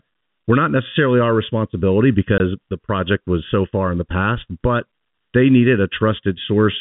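From start to finish the speech has a hollow, phasey colouring from channel delay (comb filtering). One channel arrives late by a fraction of a millisecond, and when the two are summed to mono, the shared content cancels at regularly spaced frequencies, starting near 700 Hz. On a spectrogram this appears as fixed dark horizontal bands at even intervals up to the 4 kHz ceiling of the G.711 telephone band. The bands stay put while the speech moves around them.

Between 2.38 and 2.40 s, right after "not necessarily our responsibility" and just before "the project was so", there is a 20 ms hole from packet loss filled with silence. A stretch of audio went missing and was replaced with nothing. That length points to a single lost packet. The waveform drops abruptly to a flat line and jumps straight back. On the spectrogram it shows as a thin blank vertical strip with hard edges at both ends.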